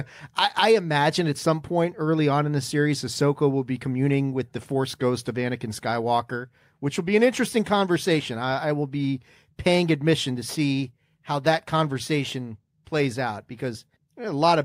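No technical faults can be heard anywhere in the speech recording.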